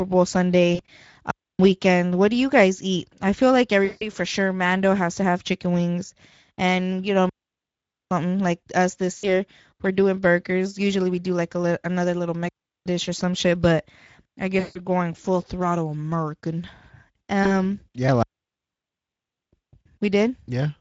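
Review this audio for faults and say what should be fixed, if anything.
Throughout, the speech sounds hoarse and grainy, with a noise-like fill above 4 kHz. This is Speex codec damage: the CELP coder has too few bits for the excitation, which points to a middle setting near 17 kbps. To prevent it, raise the Speex quality setting or use a modern wideband codec such as Opus.

At 0.75, 3.85, 9.17, 14.59 and 17.43 s, the sound smears into a buzzy or hissy tone that fades out, lasting 20 to 160 ms. This is VoIP packet loss concealed by the speech codec: the decoder extends its last pitch and filter while reducing the gain. The 160 ms gaps at 3.85 and 14.59 s recover slowly. To prevent it, use a jitter buffer, forward error correction, or a more stable network path.

At 1.31, 7.29, 12.49 and 18.23 s, the audio falls into clean holes of near silence lasting 0.28, 0.82, 0.37 and 1.18 s, with no noise burst on either side. 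This is a digital wireless dropout: the receiver mutes when the link loses too much data. To prevent it, shorten the distance to the receiver, keep a clear line of sight, or move to a less crowded channel.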